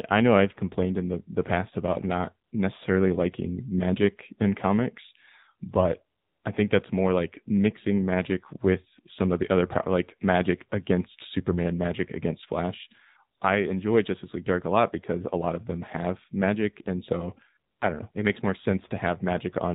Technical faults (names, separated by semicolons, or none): AMR narrowband mobile codec; AMR comfort noise